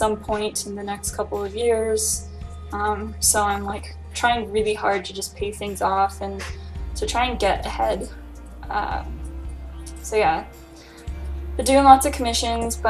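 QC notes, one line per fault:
3.36 to 3.98 s, DAB burbling: a brief run of noise blips in single sub-bands as a fraction of a percent of bit errors slip past correction.
12.44 to 12.66 s, DAB burbling: a shorter, similar burst of blips where bit errors get past correction into the audio data.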